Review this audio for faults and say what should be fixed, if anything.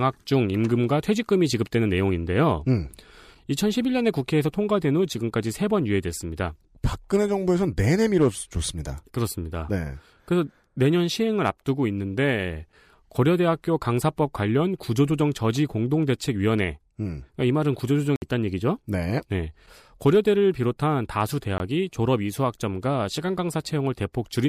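Block of digital silence at 18.16 s to 18.22 s and at 21.58 s to 21.60 s: the speech cuts out abruptly for 60 ms, heard as a short hole, then for 20 ms, heard as a brief dropout, with no fade at the edges. Zeros replaced the audio, either because the output buffer wasn't filled in time or because a calculation produced invalid numbers. Preventing it means giving the audio thread enough buffer headroom and checking processing for invalid values before output.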